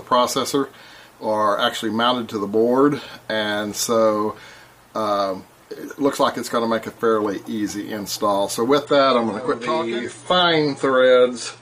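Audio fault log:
8.85–11.62 s, adaptive stream at a lower bitrate: the quality drops suddenly with no gap, and everything above about 9.9 kHz vanishes, leaving it dull with more codec artefacts. That fits the stream switching from around 96 kbit/s AAC down to roughly 32 kbit/s once the connection slowed.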